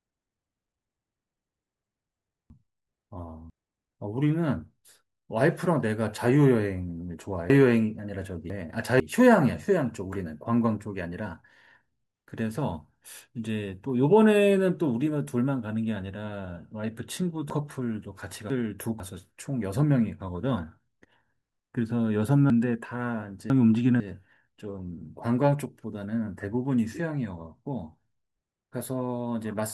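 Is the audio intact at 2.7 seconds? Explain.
No. At 2.7 s the speech falls inside a chunks-out-of-order fault spanning 2.5 to 3.5 s. A 500 ms chunk arrives one chunk late and plays after its successor, so the order is swapped. Nothing is lost, but there are three hard joins and the passage sounds jumbled.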